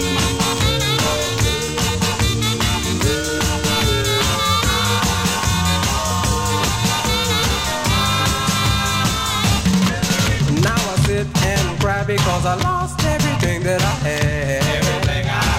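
At 4.18 s a loudspeaker feedback squeal starts: a single tone at 1.2 kHz that swells over roughly a third of a second until it is about as loud as the surrounding sound, then stops at 4.64 s. A microphone was picking up the loudspeaker it fed, and at that frequency the loop gain rose above unity, so the tone fed on itself and grew.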